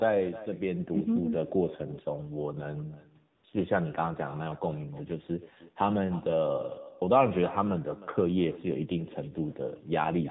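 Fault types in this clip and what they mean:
echo with no canceller: The far end's loudspeaker feeds the talker's sound back into its microphone, and nothing removes it. Every phrase returns roughly a third of a second later, about 17 dB quieter, as a thin shadow trailing the original.
AMR narrowband mobile codec: The audio passes through the AMR-NB mobile codec, so nothing above 4 kHz survives. The vocal-tract model leaves a plainly buzzy, synthetic edge on the speech, which fits one of the codec's lower bitrates, around 7.4 kbps.
AMR comfort noise: From 3.36 to 3.44 s the phone judged the talker silent and stopped sending speech frames. For those 80 ms the receiver substitutes smooth synthetic noise. The real background briefly vanishes and switches back in.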